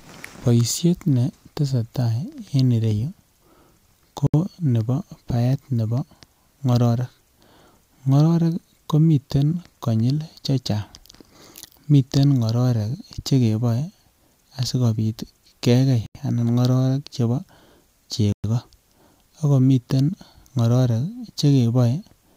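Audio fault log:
4.27–4.34 s, 16.06–16.15 s, 18.32–18.44 s: Bluetooth stall. The speech cuts to silence for 70, 86 and 115 ms, resuming at "nebo baet nebo" and between "asikopit kegei" and "anan ngororek chebo". This is likely a headphone buffer running dry while it waits for resent packets. The waveform shows flat gaps, and the spectrogram shows blank vertical columns.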